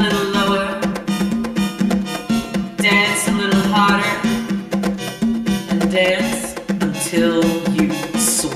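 Channel delay with comb filtering runs through the whole clip. One channel arrives around 5 ms behind the other, and when the two are summed to mono, the content they share cancels at regularly spaced frequencies. The first notch falls near 100 Hz, with further notches following at roughly 200 Hz intervals. The result is a fixed, hollow and phasey coloration that does not move over time.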